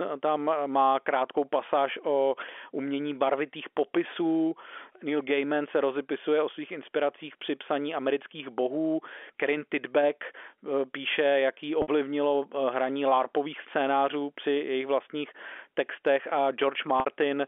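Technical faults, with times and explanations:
11.82–11.88 s and 17.00–17.06 s, packet loss with pitch repetition: each 60 ms gap, the first right after "píše jaký", is bridged by repeating the last pitch period, giving a briefly held, buzzy sound, which fits three lost 20 ms packets within the 300–3400 Hz telephone band.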